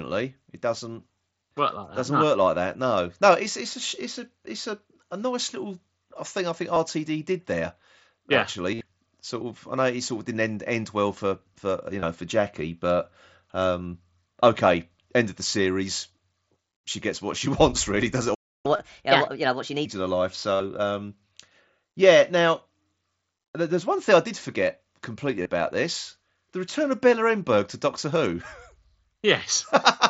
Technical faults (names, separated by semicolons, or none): concealed Bluetooth headset packet loss; playback stall; catch-up at higher speed